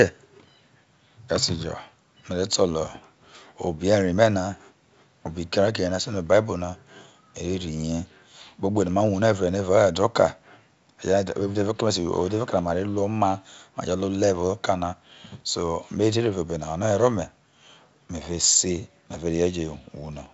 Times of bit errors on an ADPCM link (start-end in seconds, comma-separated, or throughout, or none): none